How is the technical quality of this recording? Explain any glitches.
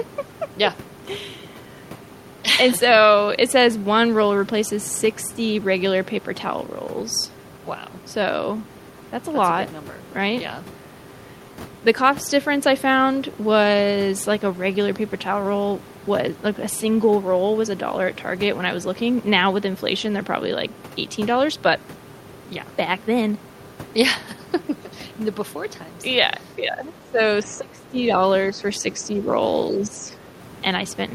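The last few seconds show echo-canceller trouble during double talk. The talker's speech is pulled down in places, and the far side leaks through once.

Speech suppressed in double talk occurs at 26.56–27.19, 27.44–27.98, 28.51–28.64, 28.82–29.28 and 29.71–30.24 s. The speech dips by about 5 to 15 dB. The likely cause is the echo canceller mistaking both talkers for echo.

The other side's voice leaks through briefly at 29.17–29.21 s. It is a faint scrap, about 25 dB below the speech, likely residual loudspeaker echo the canceller missed.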